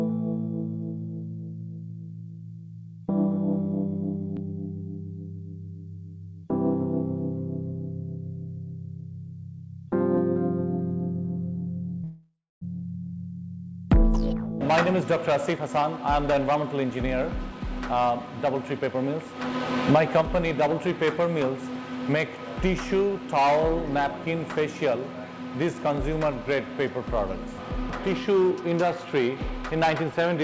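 At 12.04 s the audio hits a call audio freeze that lasts until 12.64 s. The receiver ran out of audio, most likely because packets got held up and the jitter buffer emptied, so it stretched the last bit of sound into a fading buzz or hiss. That trails off into about 260 ms of silence. Once the packets show up, playback picks up right where it stopped, so nothing is lost. About 574 ms of gap has simply been inserted, and everything after it plays that much later.

That backlog then gets cleared by a jitter buffer speed-up from 15.28 to 19.33 s. The receiver snips out tiny slices, each a pitch period or so long, over and over, so the audio runs at about 112% speed while the pitch stays put. It sounds noticeably hurried, and roughly half a second gets trimmed away. A gentler round follows from 19.91 to 20.79 s at about 106%, shaving off only a few tens of milliseconds, so the rush is much less obvious there. 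Throughout, the G.722 call codec tops out at 8 kHz, which accounts for the missing top end.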